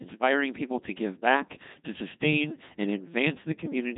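Codec 2 vocoder damage runs throughout this speech clip: the voice is rebuilt from sine waves using only pitch, voicing and a spectral envelope, so it sounds buzzy and robotic, with nothing above 3.8 kHz, which fits a rate near 2.4 kbit/s.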